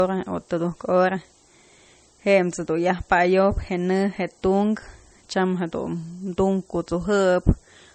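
Throughout the speech, the signal has been reduced to a low bit depth with noise shaping. It fits an 8-bit word, with the rounding error pushed upward in frequency. The result is a steady, thin hiss roughly 20 dB below the speech, climbing sharply toward the top of the band.

Also throughout, the speech still carries the artefacts of an earlier low-bitrate encoding. The cause is likely low-bitrate audio saved at a high bitrate. This fits an MP3 first encoded near 33 kbit/s, and the later high-bitrate pass cannot restore what was removed.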